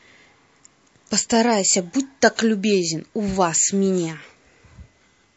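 Speech carries plainly audible watery, swirly coding damage throughout, with chirpy s sounds, most likely MP3 compression at a low bitrate around 40 kbps. Unlike broadband hiss, these artefacts flicker from frame to frame as weak frequency lines drop in and out. At 2.36 to 2.39 s, a short burst of hiss, about 11 dB above the surrounding floor, arrives roughly 22 ms ahead of a sharp attack. This is pre-echo. It differs from a click or breath because it is spread evenly across the moment before the attack. That timing fits a long transform block of about 52 ms, with the encoder never switching to short blocks.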